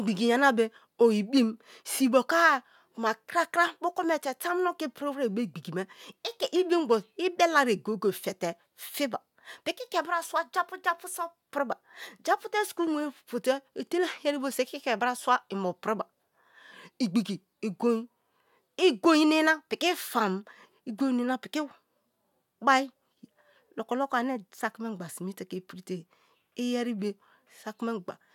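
A speech recording with nothing technically wrong to point to anywhere along its run.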